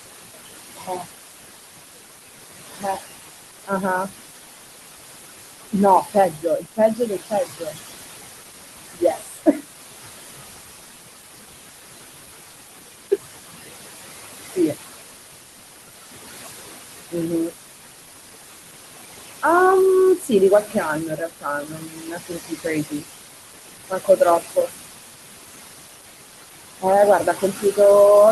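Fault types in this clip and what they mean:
noise suppressor artifacts: steady background is pulled down about 19 dB between phrases; spectrograms show patchy, flickering noise speckles in pauses.
speech cut by the noise suppressor: quiet speech mistaken for noise drops by up to about 22 dB, sounding swallowed; waveform shows abrupt dips inside phrases, longest across 19.42–24.69 s.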